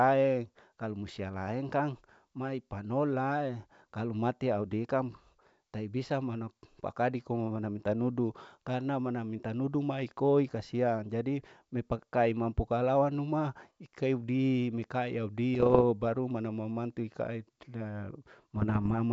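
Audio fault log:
15.54–15.83 s, bit errors on an ADPCM link: between "kalau anuma ikaidi mikai" and "baru mama mantu ikaeda" the sound breaks into pops and rough bursts with brief level jumps. Each flipped bit also throws off the decoder's step size and predictor, so the damage rings on for some milliseconds. This fits an error rate of well under one percent on what sounds like full-rate G.722.
18.54–18.93 s, bit errors on an ADPCM link: after "baru mama mantu ikaeda" the same popping and level jumps return over a slightly longer stretch, at a rate of around half a percent.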